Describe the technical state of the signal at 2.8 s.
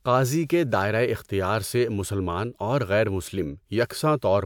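At 2.8 s the speech signal is intact, with no dropout, clipping, glitch or other fault to be heard.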